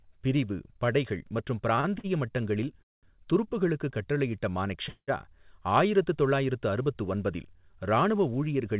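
Short stalls from a late packet occur at 1.76 s, 1.81 s and, after "பிரிவு படைகள் மற்றும்", at 1.99 s. Each time the jitter buffer ran dry and the receiver stretched the last sound by 17, 28 and 50 ms before resuming. Nothing is lost, but syllables drag slightly. On a spectrogram the harmonics run flat and smeared for those few milliseconds.

Call audio freezes follow at 2.82 to 3.06 s and, after "துருப்புக்களுக்கு கட்டளையிட்ட", at 4.89 to 5.20 s, resuming with "ஆயிரத்து தொள்ளாயிரத்து அறுபத்து ஒன்பதில்". These were likely caused by packets held up in transit. A brief fading buzz gives way to silence, 190 ms in the first freeze and 60 ms in the second. The waveform shows a decaying tail and then a flat gap. Beneath both kinds of fault, the spectrogram shows the telephone-band codec's empty region above 4 kHz.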